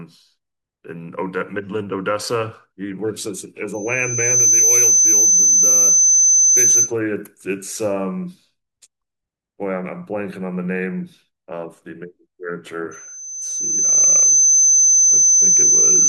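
A speech recording with loudspeaker feedback squeal, twice. From 3.73 to 6.93 s a 6.1 kHz tone swells up in under a second and sits roughly 10 dB above the speech. It returns at 12.91 s, building over about a second, and runs to the end at 16.08 s. The mic is hearing the speaker it feeds, and at 6.1 kHz the loop gain tops one, so that tone keeps reinforcing itself.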